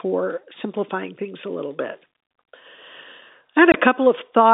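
At 3.72 to 3.74 s, packet loss filled with silence leaves a 20 ms gap, fitting one lost packet: flat silent waveform, blank spectrogram stripe, hard edges.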